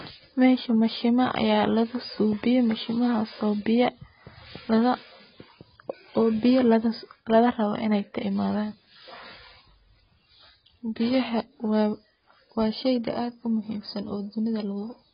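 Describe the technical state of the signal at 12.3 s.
At 12.3 s the speech sounds dull and smeared, with nothing above 5 kHz and a warbly, fizzy edge on sibilants, as it does throughout the clip. That's likely heavy AAC compression, with the encoder cutting the top band and thinning the spectrum, which points to something near 16 kbps.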